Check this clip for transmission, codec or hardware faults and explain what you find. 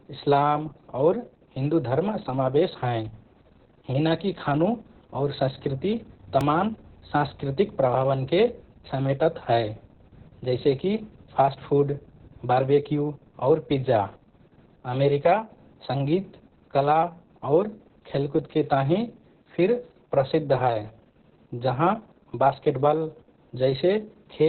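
Two faults are present: heavy codec compression across the whole speech clip, and one brief buffer repeat.

Throughout the clip, Opus voice compression is audible. At a very low bitrate, around 6 kbps, the SILK voice coder runs in narrowband mode and keeps nothing above about 4.3 kHz. It also codes the excitation coarsely, so the speech sounds muffled, hoarse and slightly robotic. On a spectrogram, the energy stops flat at 4.3 kHz with an empty band above it.

At 6.41 s, just after "और संस्कृति", there is a repeated buffer. Fresh audio arrived late, so the device replayed one 2.67 ms block twice more, which fits a 128-sample buffer. Nothing was lost, but the hard joins produce a tiny click or buzz. The waveform shows three identical short segments back to back.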